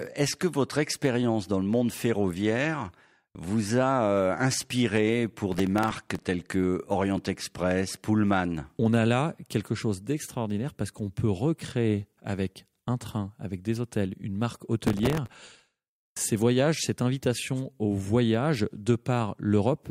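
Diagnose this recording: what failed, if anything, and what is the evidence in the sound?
Processor overload crackle hits the driver or buffer stage twice in this speech, from 5.52 to 6.25 s and again, longer and denser, from 14.83 to 15.91 s. The processor repeatedly missed its deadline, so stale audio was replayed in place of fresh samples, leaving hard-edged splices. The grit suggests a very short buffer, around one and a half milliseconds, with a couple of dozen misses first and several dozen later. A spectrogram shows clustered vertical broadband streaks, and the waveform shows small jagged discontinuities.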